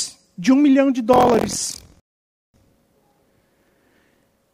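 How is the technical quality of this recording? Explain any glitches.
The recording has two clear technical faults, one continuous and one momentary.

From 1.12 s, just after "de um milhão de", to the end of the clip, there is buffer tearing. The program filling the playback ring buffer and the hardware draining it have drifted out of step, so they cross partway through every period. About a fifth of each buffer still holds speech from the previous lap, roughly 70 ms old, spliced in with a hard edge on either side. The 43.1 Hz repeat rate fits a 1024-sample buffer. It sounds like a rough, robotic buzz riding on the voice, present only while speech is playing.

From 2.00 s to 2.54 s there is a rebuffering stall. The player exhausted its downloaded audio and paused until more data arrived. The speech drops abruptly into silence, then picks up exactly where it left off, with nothing missing. 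The result is an unnatural gap of about 541 ms inserted into the flow, heard as a sudden frozen pause in the middle of the torn passage.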